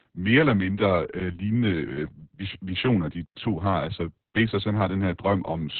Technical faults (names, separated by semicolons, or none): Opus voice compression